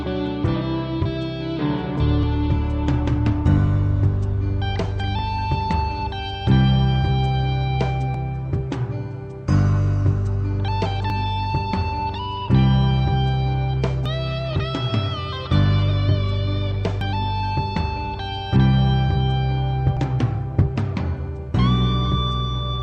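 Skips at 2.23, 5.19, 8.14, 11.10, 14.06, 17.01 and 19.97 s, each dropping roughly 40 ms and butt-joining the sound. This is likely audio missing between chunks at about 3-second boundaries. On a waveform or spectrogram, each shows as an abrupt seam with no silent gap.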